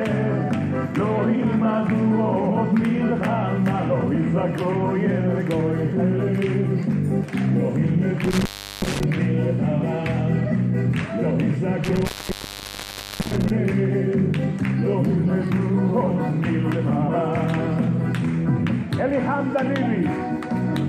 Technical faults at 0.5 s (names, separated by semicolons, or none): none